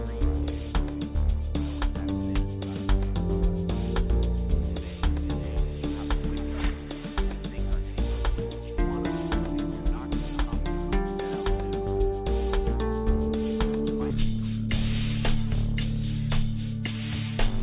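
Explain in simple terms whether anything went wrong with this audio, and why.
From 14.10 s onward, a wrong sample rate plays the sound at half speed and an octave lower. A plain pitch shift wouldn't also slow it down.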